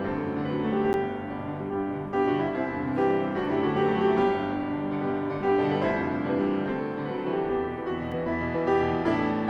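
At 0.93 s and again at 8.12 s the sound drops into a block of digital silence, about 10 ms and 4 ms long, where samples were zeroed. Both gaps are too short to be heard as silence, so the abrupt edges give a tick or dip instead.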